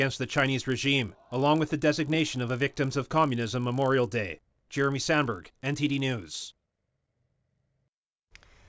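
Speech with a 50 Hz buzz under it the whole way through: a resampler restarted on every block, glitching each 20 ms block edge, likely during a 44.1 kHz to 16 kHz conversion.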